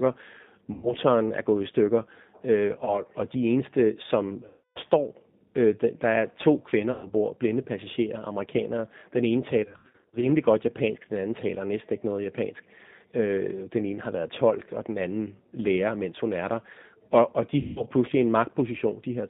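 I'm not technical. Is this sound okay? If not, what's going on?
No. The whole recording went through the G.729 codec, a compact phone-call format. It makes the speech sound thin, rough and slightly robotic.

There is also VoIP packet loss concealed by the speech codec. Pieces of the call went missing, and the decoder guessed at the gaps. You hear buzzy, smeared or fading sound there. This happens at 0.73–0.94 s, 2.77–3.01 s, 4.47–4.80 s (after "og de eneste som"), 6.92–7.13 s (between "der er to kvinder" and "blinde passagerer amerikanere"), 9.64–10.30 s (just before "godt japansk den anden") and 17.61–17.83 s.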